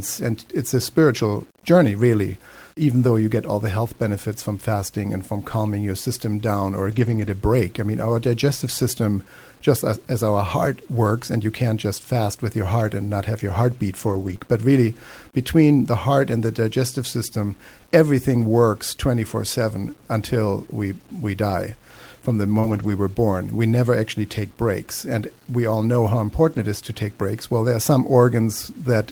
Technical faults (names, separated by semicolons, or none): low bit depth without dither; lost packet rebuilt from error correction; short concealed packet loss